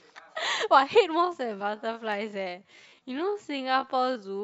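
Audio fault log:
1.21–4.43 s time-stretched section: pace slows abruptly to 0.585x, pitch unchanged, drags, likely from repeated short pieces; spectrogram shows stretched syllables, harmonics at the same spacing.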